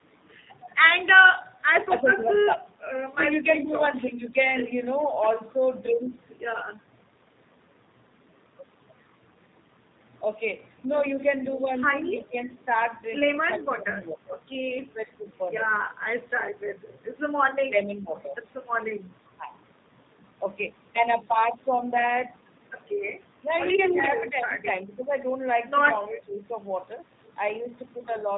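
Throughout, the speech has the slightly rough, synthetic texture and hard 4 kHz ceiling of the G.729 codec, plainly audible. The sound points to an 8 kbit/s coder rebuilding each 10 ms frame from a vocal tract filter, pitch predictor and sparse pulses.

From 5.27 to 5.31 s there is a brief echo leak: a faint scrap of delayed speech, about 30 dB below the talker and trailing by roughly 0.35 s. The likely cause is a far-end loudspeaker echo that the echo canceller failed to fully remove.

Between 17.64 and 20.44 s the talker is intermittently pulled down, by as much as about 15 dB over roughly half a second in total, with pieces dipping or dropping out. This is speech suppressed in double talk, likely from an echo canceller attenuating both its own talker and the loudspeaker echo while the other party spoke.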